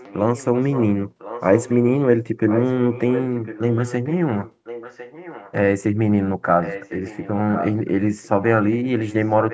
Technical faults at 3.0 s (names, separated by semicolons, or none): echo leak